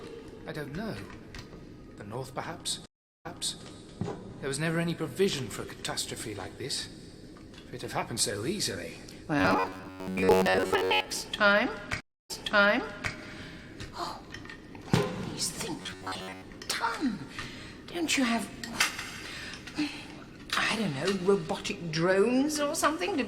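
The audio has two stream reconnects, at 2.86 to 3.62 s and 12.00 to 13.13 s. Each shows as a flat, empty gap in the waveform (392 ms, then 292 ms) before playback resumes about 0.37 s and 0.84 s earlier, repeating material already heard. Robotic sound from repeated short buffers occurs at 9.39 to 11.05 s and 15.82 to 16.42 s. There, a rigid metallic buzz near 93.8 Hz appears on a spectrogram as evenly spaced horizontal harmonic lines. This is likely from 10.7 ms chunks being looped in place of most of the real audio.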